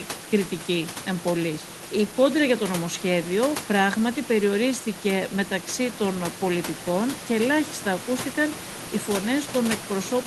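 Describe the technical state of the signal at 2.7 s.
At 2.7 s the signal is intact, with only the steady room noise about 11 dB below the speech and the normal coding character of the Opus call path.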